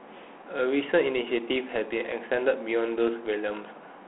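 From start to finish the speech carries Dialogic VOX ADPCM coding, the 4-bit OKI scheme of telephone systems. Each sample is stored as a coarse step relative to the previous one, so the quantisation error rides on the signal as a plainly audible gritty hiss that tracks the voice. The sound is confined to a telephone band of roughly 250 Hz to 3.4 kHz with nothing above 3.8 kHz, which fits 32 kbps coding at 8,000 samples a second.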